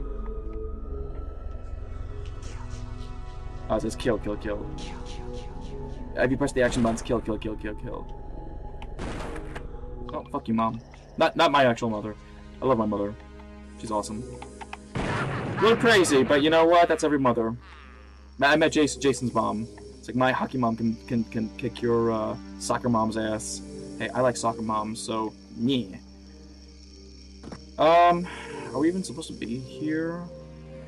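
A Bluetooth SBC bit pool drop runs from 1.61 to 4.56 s and again from 9.11 to 10.08 s. Each time the encoder's bit budget shrinks, which fits a fall in bit pool from 28 to 13, near 102 kbps. The upper sub-bands starve, so the treble dulls and a gritty quantisation noise rises until the rate recovers.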